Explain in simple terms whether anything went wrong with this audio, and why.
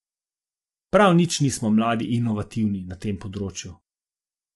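Yes, something's off, and it runs through the whole clip. The speech sounds plainly rough and grainy, with a hiss sitting between the tones of the voice, and nothing at all comes through above about 11.6 kHz, so the top end feels dull. That's likely low-delay AAC compression, the kind video calls use. It chops sound into very short slices to keep the delay down, which blurs the voice's pitch detail and squeezes the quality.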